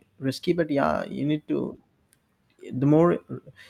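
No technical faults are audible.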